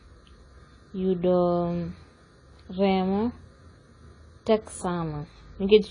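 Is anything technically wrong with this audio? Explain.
Yes. Throughout, the speech is dull with nothing above 10 kHz and plainly audible smearing, likely AAC compression at a low bitrate, consistent with about 24 kbps, which discards detail and leaves spectral holes.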